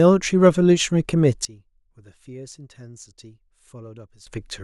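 At 1.45 s the level drops abruptly by about 19 dB, a sudden gain jump. Speech and background noise fall together, with no fade. The likely cause is a gain change applied between two samples without a ramp. Full level returns at 4.27 s.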